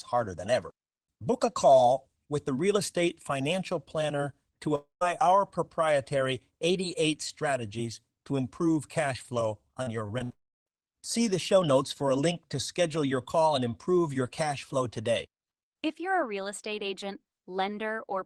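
At 4.75 s, just after "estate financial planner to", the sound breaks off for about 0.28 s before resuming at "our proprietary". The last sound is stretched into a fading buzz, and that gives way to roughly 140 ms of near silence. This is likely a long network dropout: a single extended gap in arriving audio that the receiver bridged and then abandoned, so that part of the speech never returns.

From 9.83 to 10.32 s, right after "to improve cash flow", there is repeated packet loss (robotic sound). Four short holes, the longest 61 ms, are each patched by repeating the preceding sound, covering about 27% of the span. The result is choppy, with pieces missing. Unlike a dropout, the audio keeps stuttering through several brief gaps rather than one long silence.

That stretch runs straight into a second break from 10.32 to 10.68 s. After a brief smear of continued sound, about 0.3 s of silence follows. 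This is likely another long network dropout, and here the fade-out tail is much shorter than the hole it leaves.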